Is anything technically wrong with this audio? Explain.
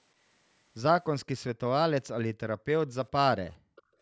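Yes, two faults appear near the end of this speech clip.

Background gated by the echo canceller, from 3.58 s to the end at about 4.02 s: while the far-end loudspeaker was active, the echo canceller clamped down on the microphone path, cutting the level by as much as about 40 dB. The room tone beneath the speech sinks abruptly and stays suppressed for roughly the last 0.4 s, so the background seems to vanish rather than fade.

Echo leak, from 3.76 to 3.82 s: a faint, brief scrap of delayed sound surfaces about 422 ms behind the original, sitting far below the speech, roughly 30 dB down. This is likely residual echo that slipped past the canceller on a loudspeaker-equipped end, where its microphone picked up the played-back call and sent part of it back. It registers as a short, faint ghost of the voice.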